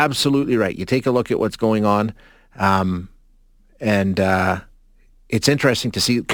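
From start to finish, the speech carries crude rate conversion. Samples were repeated to raise the rate, with no proper filter, and the pattern fits a 44.1 kHz to 48 kHz step, a ratio near 1.09. About one sample in eleven is doubled. That regular error creates shifted, inharmonic copies of the voice. It sits roughly 25 dB below the speech. It is heard as a gritty, inharmonic fizz that rides on loud and bright sounds.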